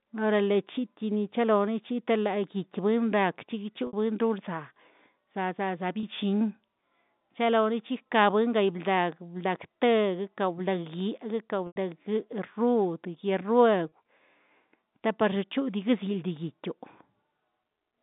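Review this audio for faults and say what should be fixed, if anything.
Packet loss with pitch repetition at 3.87–3.93, 6.00–6.03, 11.67–11.76 and 13.89–13.92 s. The receiver fills gaps of 60, 30, 90 and 30 ms by looping the last pitch period, heard as a brief held buzz. The 90 ms gap fades toward silence. Forward error correction or redundant packet transmission would prevent it.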